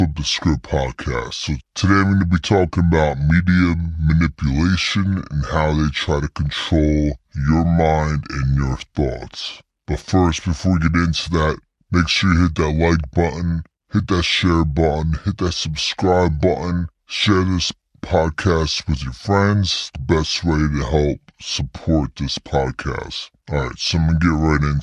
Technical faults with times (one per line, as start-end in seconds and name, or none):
0.00-24.82 wrong sample rate